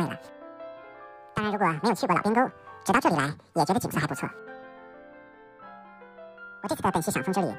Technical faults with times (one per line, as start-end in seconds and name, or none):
0.00-7.58 audio read two samples at a time (double speed)